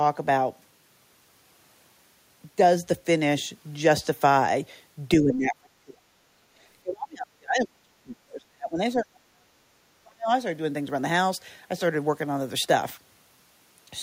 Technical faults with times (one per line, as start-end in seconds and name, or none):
5.20-6.42 speech suppressed in double talk
6.82-10.31 speech suppressed in double talk